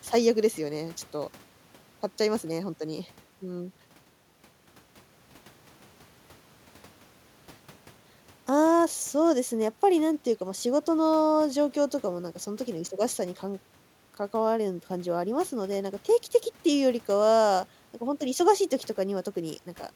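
No technical faults can be heard anywhere in this speech clip.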